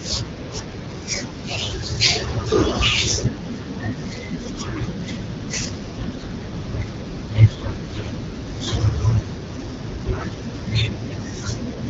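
Speech coded with the AMR wideband (HD Voice) codec at a rate that fits 12.65 kbit/s, with light codec colouring, suffers AMR bit errors twice, from 6.05 to 6.34 s and from 9.09 to 9.22 s. Around one bit in twenty of the weakly protected frame data arrives corrupted while the protected core still checks out, so misplaced excitation pulses and wrong finer pitch, gain and spectral values make the voice turn briefly hoarse, scratchy and gargly at roughly its normal pitch and level.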